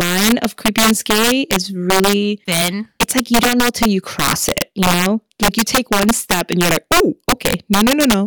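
Violent cracks burst from the loudest moments of this speech clip throughout, the signature of integer overflow: peaks driven about 10 dB too hot wrap to the opposite sign instead of limiting.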